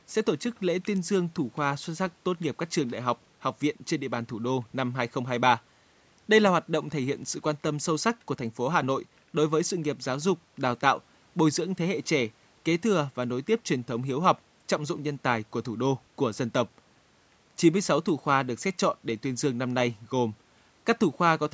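The speech carries no technical faults; it has passed through a call's microphone processing, whose high-pass filter trims the lowest bass as expected and whose band stops at about 8 kHz.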